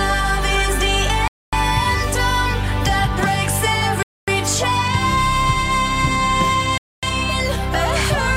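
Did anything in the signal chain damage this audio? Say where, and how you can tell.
Yes. A gap between chunks appears at 1.28–1.53, 4.03–4.28 and 6.78–7.03 s: 250 ms hard-edged silences every 2.75 s, roughly a 2.5 s chunk plus the gap. The player or chunking stage inserts silence at joins. Unlike dropouts, the sound resumes where it left off.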